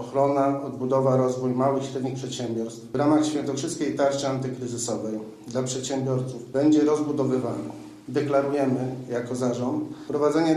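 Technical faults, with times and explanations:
No technical faults can be heard anywhere in this audio. Nothing in it calls for a time or an explanation.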